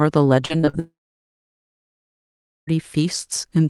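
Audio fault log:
0.45–0.75 s, repeated packet loss (robotic sound): five short gaps, longest about 42 ms, each patched by extending the previous sound, so nearly half this span turns choppy and robotic.
0.79–2.69 s, long network dropout: about 1.9 s of speech disappears, the last sound briefly stretched into a fading buzz or hiss, then roughly 1.75 s of silence, likely a dropped network link.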